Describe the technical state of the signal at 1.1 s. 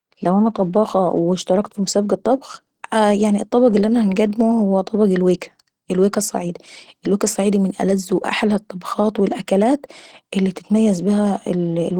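At 1.1 s the speech carries the same compression damage heard across the whole clip, and it sounds like Opus compression at work. The low end has that hoarse, muffled character of Opus's hybrid mode, where a speech coder handles the lower band and band energies are patched in above it, which fits a rate somewhere around 16 kbps. The top still reaches about 20.2 kHz, but it's grainy and rough rather than clean, and the damage is plainly audible.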